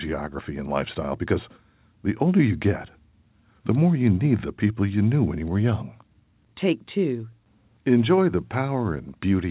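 The audio shows no technical faults, and it carries the narrowband character of a call path, with nothing above 4 kHz, which fits a G.711 A-law telephone codec at 64 kbps.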